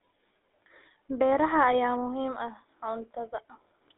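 The whole clip has passed through the GSM full-rate codec, the original mobile-phone coder, whose crude regular-pulse excitation fits its 13 kbps rate. It rebuilds the voice from a vocal-tract model driven by a coarse pulse train, and the line limits the band to roughly 300 Hz to 3.7 kHz, with nothing above 3.8 kHz. The speech is thin and boxy, and the damage is plainly audible as a buzzy, gravelly roughness on the voice.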